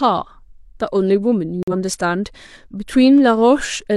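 At 1.63 s, a corrupt frame is muted: the decoder rejected damaged compressed data and silence replaced it, leaving an abrupt 0.1 s hole that fits two lost frames.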